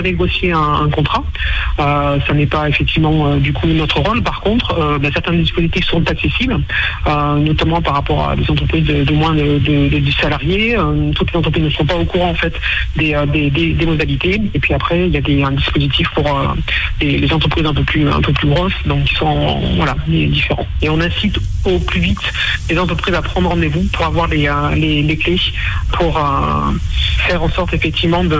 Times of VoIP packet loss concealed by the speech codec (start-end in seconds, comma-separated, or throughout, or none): none